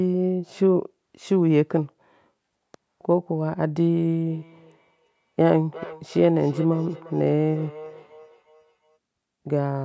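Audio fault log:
4.29–8.98 s, feedback echo between two devices: the sound comes back as a delayed copy, roughly every 0.4 s. The repeats peak at about 19 dB below the direct speech. Two devices on one call sit in the same room. One plays what the other's microphone sent, and that microphone picks it up again. Each echo canceller only removes its own device's playback, so the loop survives. The sound above 8 kHz is absent, as expected from the call's microphone processing.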